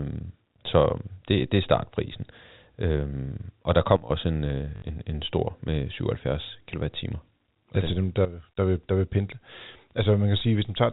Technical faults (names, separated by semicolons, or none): sudden gain jump; packet loss with last packet repeated